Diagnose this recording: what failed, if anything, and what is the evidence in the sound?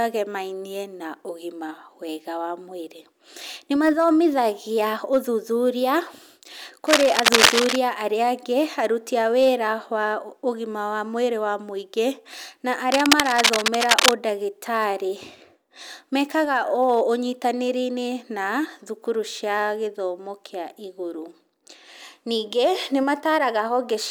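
Likely a worn analogue cable or connector with flickering contact resistance, producing cable scratch noise: uneven scratching over the speech at 6.87–7.76 s and 12.91–14.13 s.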